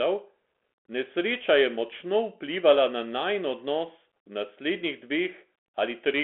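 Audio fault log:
Throughout: Bluetooth CVSD headset codec. The speech is confined to roughly 250 Hz to 3.4 kHz, which fits a 64 kbps CVSD link. One-bit delta steps lag loud high sounds, so peaks distort, s sounds turn scratchy, and a granular hiss sits beneath.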